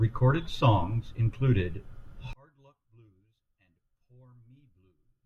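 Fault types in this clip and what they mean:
One channel inverted: from about 2.33 s, right after "songs include", the speech falls away by about 35 dB and stays down to the end, leaving only a faint trace. That's the signature of one stereo channel likely having its polarity flipped. When the two sides get summed to mono, everything they share, the centred speech included, cancels out, and you're left hearing just the small difference between them.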